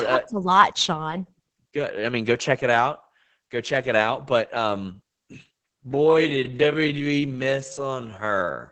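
From the start, the speech has the muffled, hoarse, slightly robotic edge of heavy Opus voice compression. The band stops around 8 kHz and the excitation is coarsely coded by the SILK linear-prediction coder, which fits a bitrate of roughly 10 kbps.

At 5.72 s the pace abruptly drops to about 0.53 times normal speed and stays there to the end, while the pitch doesn't move. It drags, likely a time-stretched section where short pieces were repeated to slow it without lowering the pitch.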